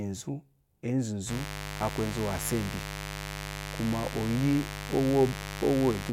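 From 1.26 s to the end, a mains buzz sits under the speech: a steady, raspy tone built on 50 Hz, with harmonics climbing into the kilohertz range. Switching spikes from a dimmer, rectifier or poor shielding entered twice per cycle, and the buzz sits roughly 10 dB below the speech.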